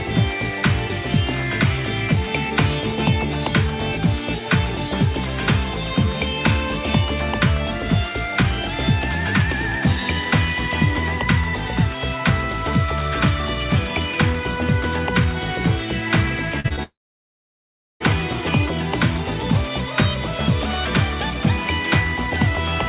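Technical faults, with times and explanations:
16.60, 16.68 and 16.76 s, short concealed packet loss: gaps of 40, 20 and 20 ms were filled by extending the preceding sound, giving brief smears or wobbles.
16.83 to 18.02 s, long network dropout: the sound continues briefly, then about 1.1 s of silence follows before audio resumes with that stretch missing, likely from packets never arriving.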